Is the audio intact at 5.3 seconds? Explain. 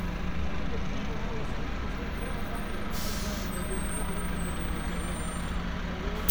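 Yes, the audio is intact at 5.3 seconds, with no audible fault at that moment.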